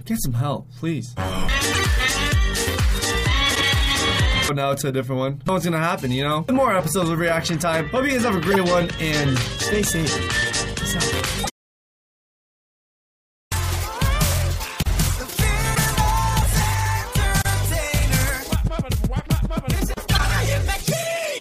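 Corrupt frames decoded: bit errors reached the decoder, which played each damaged frame anyway, spraying energy into wrong frequencies. Short chirpy noise bursts, a few frames long and peaking around -5 to -10 dBFS, land at 1.72–1.80, 3.50–3.61, 8.51–8.57, 11.41–11.50, 15.73–15.79 and 20.08–20.20 s.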